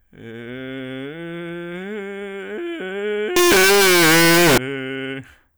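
Music that, from 3.36 to 4.58 s, turns into very loud, harsh distortion with no quiet passages. On the waveform this shows as full-range jumps at every zero crossing, and on the spectrogram as broadband energy filling the band. It is likely signed and unsigned mixed up on 16-bit samples.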